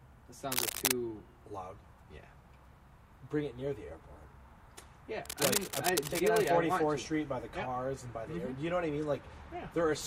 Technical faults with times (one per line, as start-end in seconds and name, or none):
0.48-0.91 cable scratch noise
5.24-6.53 cable scratch noise